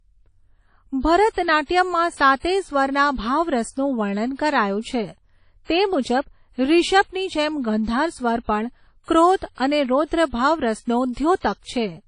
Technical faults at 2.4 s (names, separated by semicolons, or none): WMA compression